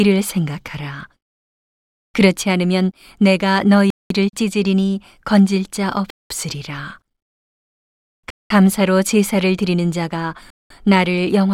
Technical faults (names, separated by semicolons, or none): gap between chunks